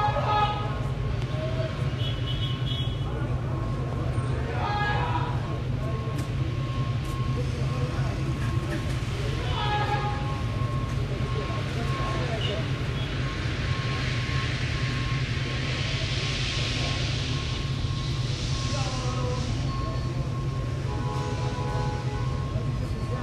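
It's a recording of sounds with two loud pops at 1.22 s and 3.93 s, each peaking about 10 dB above the audio, likely voltage spikes from a plug, switch or static. At 5.45 s compressed frames were skipped, and the audio jumps ahead roughly 70 ms, which fits about three 26.1 ms frames.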